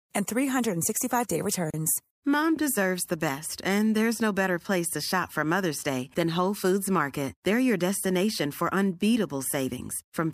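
A speech recording with a gap at a join of encoded pieces: from 1.70 to 1.74 s the sound drops out for about 33 ms, leaving encoder start delay and end padding between separately encoded pieces spaced 10 s apart. The spectrogram shows a narrow vertical blank band, and the waveform shows a flat stretch with smeared edges before the sound resumes.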